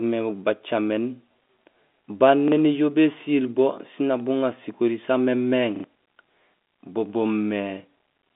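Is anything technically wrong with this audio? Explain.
Yes. The speech has two repeated-buffer stutters. At 2.48 to 2.52 s, a 40 ms piece plays twice. At 5.76 to 5.84 s, just after "nak buŋaar sikori samémééŋ", a piece plays three times. The repeat length fits a 40 ms buffer that was replayed because new audio arrived late. Each repeat starts with a hard join, and about 40 ms and 70 ms of speech are lost. A dropout would leave a silent gap at those points. Here the same sound is repeated, so you hear a stutter. The narrow telephone band of the G.711 line is audible throughout.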